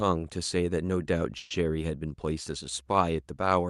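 At 1.37 s the speech halts for about 0.15 s, to 1.52 s, and the gap is filled with a buzzy, fading continuation of the last sound rather than silence. It then resumes exactly where it stopped, with nothing lost, so everything afterwards runs about 130 ms late. This is a call audio freeze, likely from packets stalling in transit until the jitter buffer emptied. The Opus call path's top end stops near 12 kHz.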